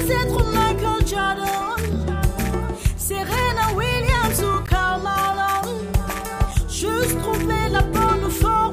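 At 4.66 s and again at 6.51 s, the sound drops out in a block of digital silence. The first gap lasts 16 ms. The second lasts about 5 ms, which fits a 256-sample block. Samples were replaced by zeros, with no fade. The second gap, being under 15 ms, is heard as a tick rather than as silence.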